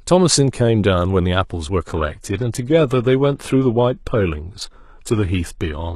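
Speech, with an adaptive stream dropping to a lower bitrate at 1.87 s that lasts to the end of the clip. The switch is abrupt and leaves no gap. Compression artefacts grow. The player has moved to a leaner version of the stream after the connection slowed. The sound fits a change from 96 kbit/s AAC to 16 kbit/s HE-AAC.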